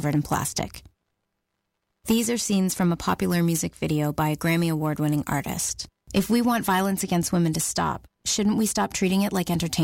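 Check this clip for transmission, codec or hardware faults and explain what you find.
Nothing to report: the speech runs continuously, with no audible fault anywhere in the clip.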